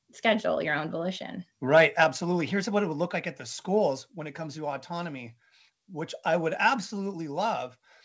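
From 1.76 to 2.04 s the loudest speech peaks are flattened at the converter's limit, giving a harsh, crackling edge. This is likely microphone overload, with the input driven about 5 dB past the converter's limit so that a small fraction of samples are clipped.

At 2.04 s the speech and the background together drop by about 5 dB in a single step, right after the distorted stretch. That is the signature of the microphone volume stepped down, likely by the call software reacting to the clipping. The G.722 call path's 8 kHz upper limit stays the same across the change.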